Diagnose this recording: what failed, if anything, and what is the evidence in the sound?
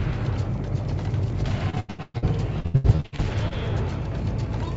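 The failure is in the network stage: repeated packet loss (robotic sound) in two bursts, from 1.70 to 2.24 s and from 2.60 to 3.53 s. Packets kept arriving lost or late, and the receiver bridged each hole by extending the previous fragment. That stretched filler, with pieces missing, is what makes the sound choppy. In the first burst about two thirds of the span is concealed, with the longest hole near 118 ms. The second burst is lighter, at about 39%, with its longest hole around 82 ms. A buffer underrun would leave clicks or true silence. Here the gaps are filled with a smeared repeat of what came just before, and the band limit near 8 kHz from the call codec stays steady throughout.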